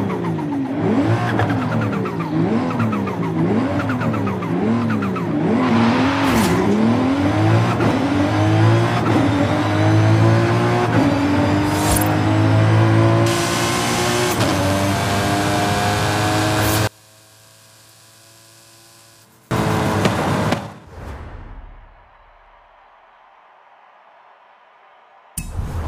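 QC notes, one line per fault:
16.87–19.51 s, one channel inverted: the summed level drops by about 30 dB and the centred content nearly disappears, leaving a faint residue. This is likely a polarity flip on one stereo side, so the material shared by both channels cancels in mono.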